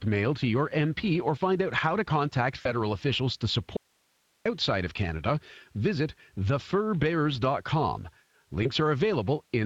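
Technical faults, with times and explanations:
Throughout: Speex codec. The speech sounds noticeably hoarse and grainy. A bitrate near 20.6 kbps leaves this CELP coder too few bits to describe the excitation accurately, so the fine detail of the voice is replaced by coarse approximations.
2.61 to 2.72 s and 8.63 s: VoIP packet loss concealed by the speech codec. Just after "out how to contact", the voice smears into a brief, fading sound before "officials to", and a shorter blip recurs later. The decoder rebuilt about 40 ms, then 20 ms, of missing audio by extending its last pitch and filter.
3.77 to 4.46 s: audio dropout to a faint residue. Right after "officials to", the speech cuts off abruptly for about 0.69 s, leaving only faint hiss some 45 dB below the voice before it snaps back. The likely cause is the signal being lost while the downstream path stayed live.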